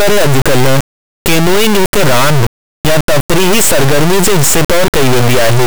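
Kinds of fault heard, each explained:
integer read as float: 32-bit integer speech decoded as 32-bit float, so samples slam between silence and clipping; waveform shows square-like blocks, spectrogram dense broadband harmonics throughout.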